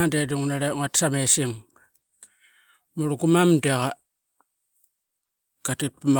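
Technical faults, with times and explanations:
Nothing stood out as a technical problem on listening to the speech in this clip.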